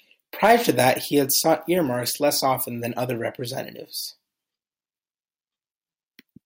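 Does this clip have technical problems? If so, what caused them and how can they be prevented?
Yes. Hard clipping runs from 0.43 to 0.90 s, just before "he had". Peaks overshoot the stage's limit by about 4 dB, so they're flattened into harsh crackle. Lower the input gain to leave headroom.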